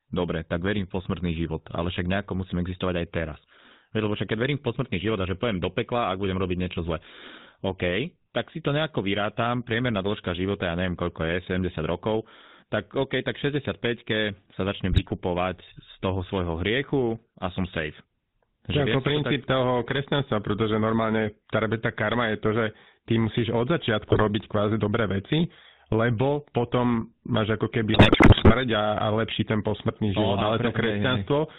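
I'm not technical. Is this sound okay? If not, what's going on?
No. The whole recording went through the GSM full-rate codec, an old mobile phone system, so the speech sounds buzzy and rough and lacks crisp high tones. GSM bit errors, corrupted data on a weak phone link, cause squawks and gargling at 14.92 s after "sa začnem", at 24.08 s before "kvázi dobré veci lebo", and from 27.94 to 28.55 s after "máš ako".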